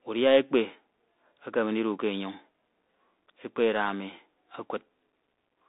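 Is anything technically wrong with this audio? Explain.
Yes. Throughout, the speech carries the Bluetooth CVSD headset codec: nothing passes above 3.8 kHz, and one-bit up/down coding with an adapting step leaves granular hiss, scratchy s sounds and smeared loud peaks. That grit is what separates it from a clean 250 Hz to 3.7 kHz telephone band-limit.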